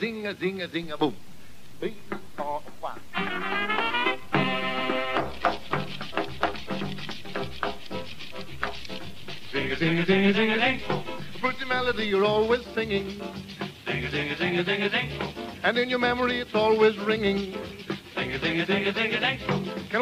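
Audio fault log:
0.84 to 12.11 s, DC step: the waveform's zero line jumps to an offset of about -35 dBFS and holds there until it steps back at 12.11 s, as when an input carrying an offset is switched in and then out. Each jump lands as a low thump or click while the sound continues unchanged.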